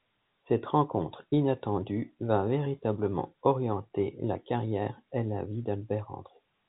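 No faults occur anywhere in this speech recording.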